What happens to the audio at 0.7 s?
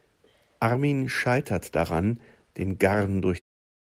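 At 0.7 s the speech runs on intact, with no dropout, click, distortion or change in level at that point.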